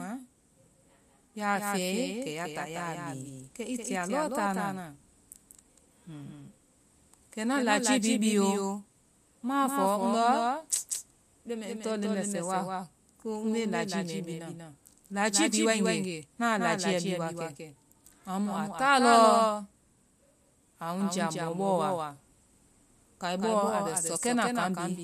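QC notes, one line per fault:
Throughout: doubled audio track. A second full-band copy of the speech trails the original by roughly 200 ms, sitting a few dB quieter, so every syllable gets a flat, slapback-style repeat. It has no decay or room colour, so it isn't a reflection. It's the same signal laid in twice at a fixed offset. The likely cause is the audio being captured a second time through a slower path, or an edit that left two copies out of step.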